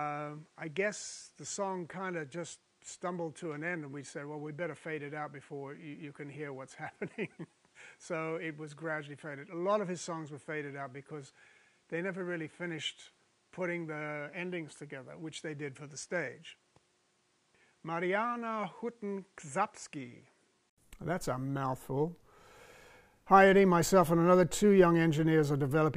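Until 20.78 s, the sound is dull and quieter, with nothing above 10.9 kHz. After an 80 ms gap it clears. Likely an input switched to a poorer device.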